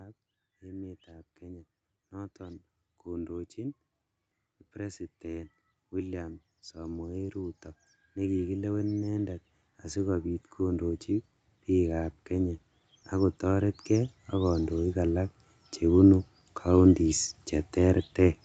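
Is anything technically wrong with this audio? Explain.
Yes. Automatic gain rising occurs from 0.46 to 3.85 s, lifting level by about 4 dB, then again from 4.73 to 15.05 s by about 16 dB, ending just before "alak chebunu". The gain control judged the input too quiet and ramped up, so speech and background swell together.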